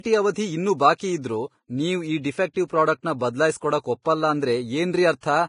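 All the way through, the speech has a hissy, grainy treble with nothing above 10.5 kHz, roughened tones and smeared consonant attacks. That's heavy damage, likely from Vorbis compression at a low bitrate, maybe around 28 kbps, where fine high-frequency detail turns into noise.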